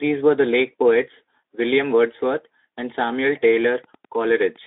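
A nearby Wi-Fi radio coupling into the audio circuit, where its transmissions are rectified into audible pulses, puts Wi-Fi interference into this speech clip from 3.34 s to the end at 4.67 s. The beacon, repeating every 102.4 ms, produces a steady ticking about ten times a second, sitting roughly 30 dB below the speech. Throughout, the speech passes through a narrow telephone-style band of about 200 Hz to 3.7 kHz, with nothing above 3.8 kHz.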